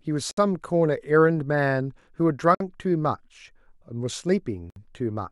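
Gaps at joins of encoded pieces fall at 0.31 to 0.37 s, 2.55 to 2.60 s and 4.70 to 4.76 s, lasting 62, 56 and 61 ms. The speech was encoded in separate pieces and joined without trimming, so each piece's start-up delay and padded final frame remain as silence. Each gap cuts into continuous speech with smeared edges, and the speech then resumes exactly where it broke off.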